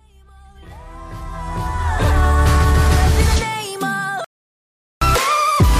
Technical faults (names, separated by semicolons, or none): audio dropout to silence